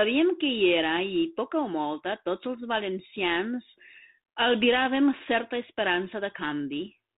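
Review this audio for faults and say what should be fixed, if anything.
Nothing needs fixing: no faults found; the speech carries the band-limited character expected of G.726 ADPCM at 32 kbit/s, with nothing above 4 kHz.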